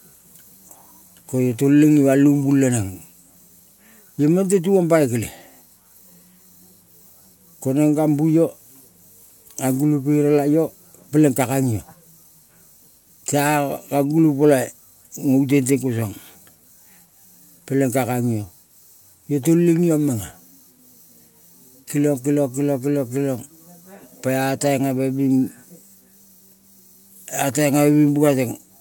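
Speech with no audible faults.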